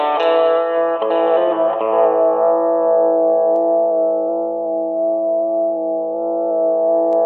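No technical faults can be heard anywhere in the recording.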